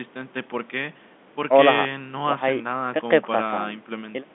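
No technical faults can be heard in this speech.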